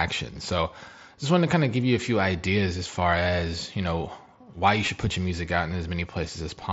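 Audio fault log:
4.86 s, concealed Bluetooth headset packet loss: a 15 ms buzzy hold between "you know why you" and "put your music out", where lost packets were filled by repeating the preceding waveform.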